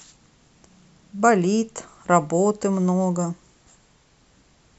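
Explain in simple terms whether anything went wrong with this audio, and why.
Nothing went wrong here: the speech comes through as a steady, continuous recording with no dropouts, glitches or distortion to point to at any moment.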